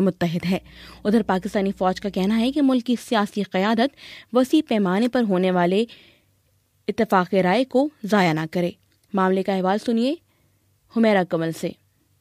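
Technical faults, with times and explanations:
0.45–2.60 s, mains hum: a steady low 60 Hz drone sits about 30 dB below the sound, power-line energy leaking in through a ground loop or nearby transformer.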